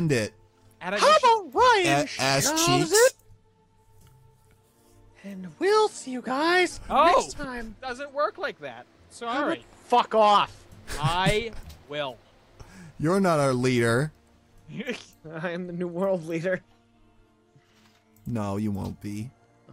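Nothing technically wrong is audible anywhere in this recording.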